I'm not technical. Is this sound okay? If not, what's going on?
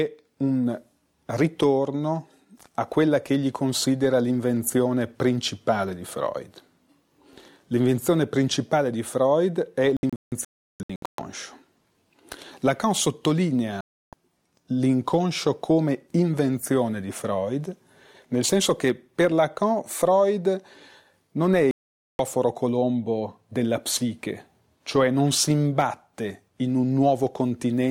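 No. This is a digital broadcast dropout: the receiver lost the signal and muted until it recovered. There are gaps from 9.97 to 11.19 s (several short holes), 13.81 to 14.13 s, and 21.71 to 22.20 s. The sound sent during those moments is gone.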